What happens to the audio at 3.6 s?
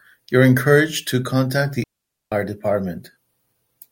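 Nothing goes wrong at 3.6 s: the speech there carries through cleanly, with no dropout, click, distortion or other fault at that point.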